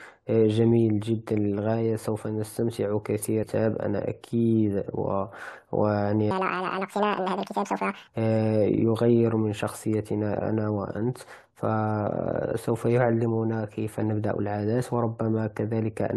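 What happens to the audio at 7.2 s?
At 7.2 s the speech falls inside a section at the wrong speed, running from 6.31 to 8.08 s. That stretch plays 1.86 times faster than it was recorded, so the voice turns hurried and chipmunk-like, raised by roughly ten semitones. The likely cause is the segment being clocked at the wrong rate during editing or playback. Unlike a pure pitch shift, tempo and pitch move together, and the timing snaps back to normal at 8.08 s.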